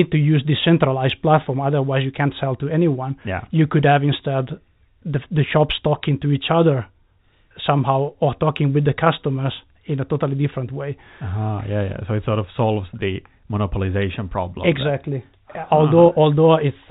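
Speech carried over G.711 telephone coding, band-limited at 4 kHz as that format requires, with no faults to report.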